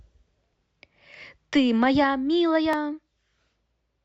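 At 2.73 s, an overlap between stream segments removes about 13 ms of speech at a 2 s segment boundary: a tiny skip, shown as a waveform discontinuity and thin vertical spectrogram line.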